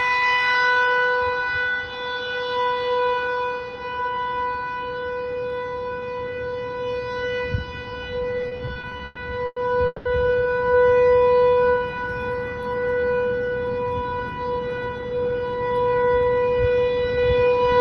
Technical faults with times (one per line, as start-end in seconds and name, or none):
8.41-10.08 repeated stalls (stutter)
11.24-11.99 jitter buffer slow-down
13.84-15.60 jitter buffer speed-up